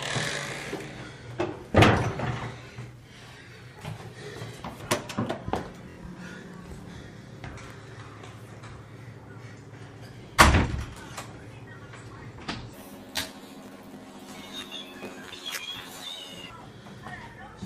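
From 12.73 s to 16.52 s the sound jumps up an octave and picks up a rough flutter, a classic case of planar audio read as interleaved. Each 21.77 ms block holds all its left samples followed by all its right ones, but the reader treats them as alternating pairs. So every block plays twice at double speed, left then right. That keeps the overall timing intact while shifting pitch 12 semitones up, with a flutter at the 45.9 Hz block rate.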